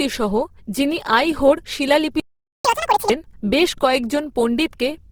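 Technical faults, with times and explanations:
Throughout, Opus compression: the speech sounds grainy and rough, with tonal parts turned noisy while the spectrum stays full up to about 20.1 kHz. The damage is plainly audible, which fits the likely cause, Opus in its music mode at a low rate around 16 kbps.
2.20 to 2.65 s, playback stall: the speech breaks off mid-flow and the output goes silent for about 0.45 s, then resumes. This is likely a player starved of data or blocked, so nothing reached the output until it recovered.
2.65 to 3.10 s, catch-up at higher speed: right after the gap the speech runs at twice normal speed, pitch raised by roughly ten semitones, as the player resamples its backlog to recover lost time before dropping back to normal.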